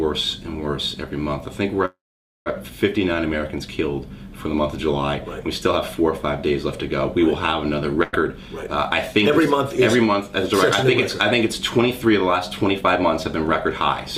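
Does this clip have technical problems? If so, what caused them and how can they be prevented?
Yes. A call audio freeze runs from 1.85 to 2.48 s: the sound stretches into a fading fill and then about 0.49 s of silence, then resumes where it stopped, with nothing lost but about 0.6 s of added delay, likely from packets held up in transit until the jitter buffer ran empty. Preventing it means a network path with less delay variation, such as wired links and traffic prioritisation.

A burst of packet loss hits 8.03 to 8.15 s. Roughly 0.1 s of audio never arrived in time, so the receiver extended and faded the last sound across the gap, then jumped ahead past the missing stretch. Forward error correction or redundant packet coding would let the receiver recover bursts like this.

Jitter buffer speed-up follows at 8.32 to 8.68 s (108% speed), 9.13 to 10.27 s (105%), 11.59 to 12.22 s (105%) and 12.72 to 13.48 s (106%). 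The receiver removed short pitch-period pieces, a few tens of milliseconds in each stretch, so the audio sounds hurried at unchanged pitch. Steadier packet delivery reduces these catch-up phases.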